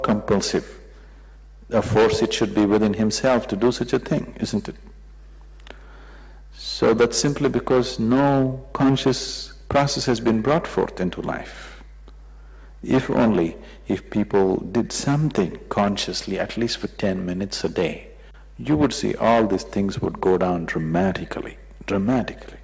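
A steady mains hum at 50 Hz runs through the whole clip, roughly 20 dB under the signal, likely from a ground loop or nearby transformer, and the band-limit stops around 8 kHz.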